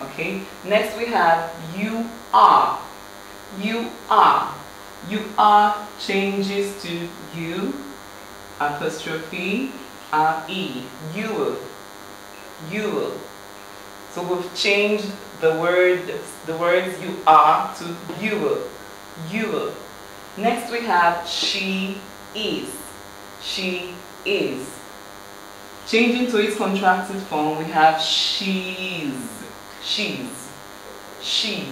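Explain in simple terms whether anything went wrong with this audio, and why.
A nearby cordless phone sends a radio pulse every hundredth of a second that leaks into the recording. This is DECT cordless phone buzz: a thin, steady buzz under the sound from start to finish.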